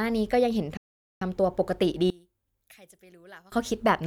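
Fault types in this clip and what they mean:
Playback stall: The speech stops in mid-flow at 0.77 s and the output goes silent for about 0.44 s. It resumes at 1.22 s. A gap like this, with the sound simply cut off and then picking up again, is likely the player running short of data or having its thread held up. Nothing is heard during the gap.
One channel inverted: From 2.10 s to 3.52 s the speech drops sharply, by about 27 dB, and turns faint. The likely cause is one stereo channel with reversed polarity. When the two channels are combined, whatever they share cancels out. Centred speech and low frequencies almost disappear. Only the small difference between the channels is left. The full level returns at 3.52 s.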